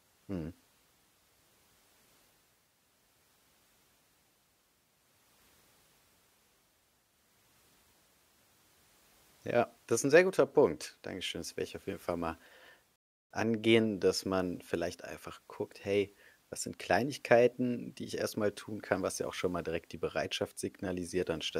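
Around 12.96 s the speech drops into silence for about 0.35 s, a rebuffering stall where playback starved, then picks up at "angehen dass man vielleicht" with nothing missing.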